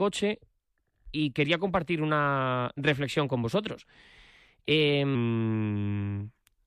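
A short speech recording where the last stretch, from 5.15 s to the end at 6.67 s, plays as a section at the wrong speed: it runs at about 0.89x, so pitch drops around two semitones and everything turns slower and deeper, likely from being fitted to the wrong clock.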